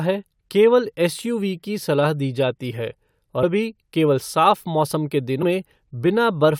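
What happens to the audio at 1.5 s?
Nothing goes wrong at 1.5 s; the speech there plays through intact, with no dropout, click, distortion or other fault.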